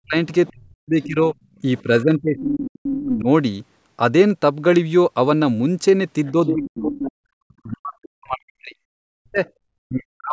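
Speech suppressed in double talk runs from 0.03 to 3.28 s. The talker's level keeps dipping, in places by as much as about 40 dB, and those dips add up to roughly 2 s. The likely cause is an echo canceller that heard both ends at once and turned everything down.

Other side's voice leaking through overlaps that stretch. A second voice is audible from 0.46 to 1.07 s at about 20 dB below the talker, as a brief scrap near 1.8 s at about 30 dB down, and from 2.37 to 2.92 s at about 10 dB down. Residual loudspeaker echo that the canceller likely failed to remove comes through as this background voice.

The leak returns from 6.25 to 7.12 s at its strongest, only about 5 dB under the talker. Double-talk suppression starts again at 6.32 s and lasts until the end of the clip. The talker's speech is again pushed down by up to about 40 dB for roughly 3 s in total, and a faint echo fragment at 9.45 to 9.51 s, about 35 dB down, slips through. 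The band stops near 8 kHz, which is the call's own microphone processing.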